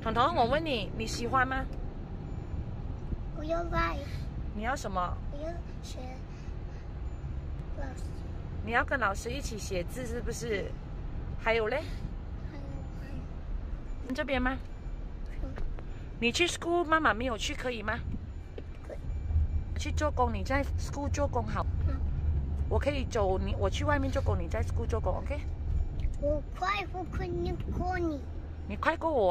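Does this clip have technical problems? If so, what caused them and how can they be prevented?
Yes. Damaged data in a compressed stream shows up at 7.6, 14.1, 19.76 and 21.62 s as brief chirps or blips. At each point corrupted bytes made the decoder misread frames, lose sync and skip ahead to the next valid frame header. Checksummed transfer and storage, with error-checked streaming, would prevent it.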